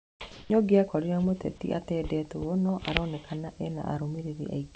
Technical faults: comfort noise in place of the background

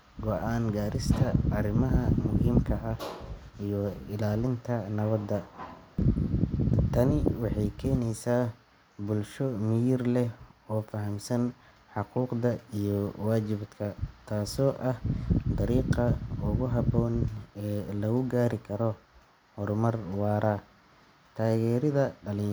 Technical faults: none

